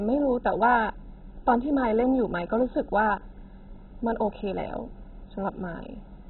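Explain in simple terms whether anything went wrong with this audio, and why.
Throughout the speech, the sound is dull and muffled, with nothing above about 4 kHz, and it carries a gurgling, grainy distortion. That pattern points to heavy MP2 compression as the likely cause. This older codec splits the sound into narrow frequency bands and shares out a small bit budget among them. When bits run short, the upper bands are switched off entirely and the remaining ones are stored so coarsely that they churn and bubble.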